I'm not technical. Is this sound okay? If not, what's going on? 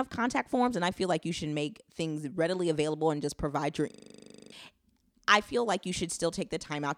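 No. From 3.92 to 4.52 s there is a system hang loop. The computer briefly froze, and the sound hardware kept replaying the same 40 ms scrap of speech, 15 times, at 25 per second. It sounds like a buzzing stutter, and about 0.7 s of speech is lost.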